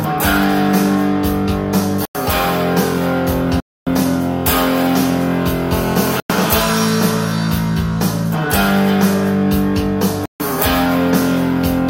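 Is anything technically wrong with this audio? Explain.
Yes, there are two separate problems.

First, the sound drops out to dead silence four times: at 2.05 s for about 97 ms, at 3.6 s for 266 ms, at 6.2 s for 96 ms, and at 10.26 s for 145 ms. Each gap comes and goes cleanly. That pattern points to a likely Bluetooth stall: interference delayed packets, the headphone buffer emptied, and playback sat idle until the resent data arrived, then resumed.

Second, from 5.73 to 6.64 s there's a GSM phone buzz, a harsh, raspy tone at 217 Hz with lots of harmonics, sitting only about 8 dB below the wanted audio. It has nothing to do with the program material. A nearby 2G handset on a call was bursting at that rate, and the audio circuitry rectified those radio pulses into audible buzz. Because it's a call, the buzz holds steady while present, and one of the stalls lands right inside it.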